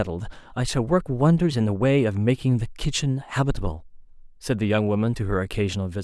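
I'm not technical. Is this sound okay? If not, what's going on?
Yes, this sound is okay, and there's nothing going on with it that needs fixing.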